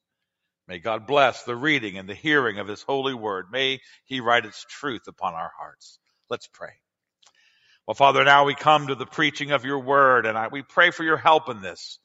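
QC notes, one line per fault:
Nothing stood out on listening.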